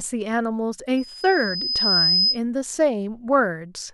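From 0.97 to 2.4 s, loudspeaker feedback squeal: the mic-to-speaker loop exceeds unity gain at 5 kHz, a tone swelling over about a second to somewhat above the speech.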